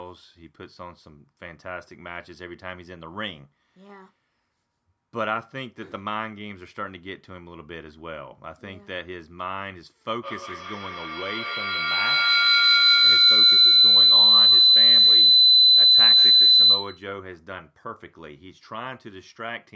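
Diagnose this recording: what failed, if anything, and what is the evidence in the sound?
Feedback howl from 10.22 s to 17.2 s, acoustic coupling between two devices on the same call. A loud tone near 4 kHz builds to about 17 dB above the speech and pulses roughly every 150 ms. Each trip round the loop adds gain, so the repeats grow rather than decay.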